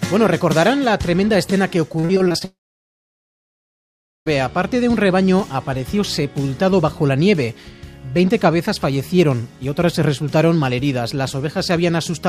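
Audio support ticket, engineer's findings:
Repeated packet loss (robotic sound), 1.99 to 2.43 s: choppy texture with pieces missing. Seven short gaps, longest 38 ms, roughly a third of the span patched by stretching the preceding audio. Network path delivering late or lost packets; jitter buffer concealing each hole before the next arrives.

Long network dropout, 2.45 to 4.28 s: audio cuts out immediately after the choppy stretch. Last sound carried on as a fading buzz or hiss, then about 1.7 s of silence. Audio resumes at 4.28 s with the missing portion gone. Likely a sustained network outage, with receiver concealment running out and muting.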